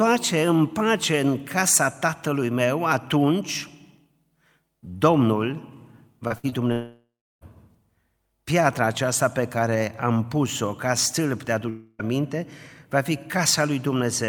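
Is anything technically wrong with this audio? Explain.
Yes. The speech has a cluster of network packet-loss faults between about 6.3 and 7.4 s, and one more dropout near 11.7 s.

Short concealed packet loss occurs at 6.27–6.32 s and again at 6.49–6.54 s. Each time about 20 ms of audio failed to reach the decoder, and the receiver extrapolated the preceding sound for roughly 25 ms and 23 ms respectively before blending back. The result is a brief smear or wobble.

A burst of packet loss sits between them, at 6.38–6.45 s. About 60 ms of consecutive audio went missing. Concealment stretched the last sound over roughly 55 ms while attenuating it, giving a short held buzz or fading hiss before the speech resumes further along.

Long network dropouts follow, likely caused by a stall in packet delivery. From 6.72 to 7.43 s about 0.7 s is lost. The concealed tail fades, and roughly 340 ms of that span is silence. 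At 11.69–12.01 s, right after "ca stâlp de", about 0.3 s is lost. That gap is filled entirely by a decaying continuation with no silent stretch, and the audio then resumes past the missing section.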